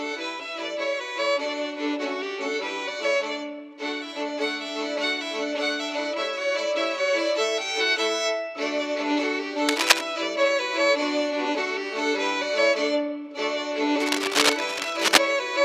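Cable scratch noise bursts in at 9.67–10.01 s, well above the sound, and 14.00–15.18 s, at roughly equal level. It is likely a worn connector, and shows as ragged broadband smears and jagged spikes.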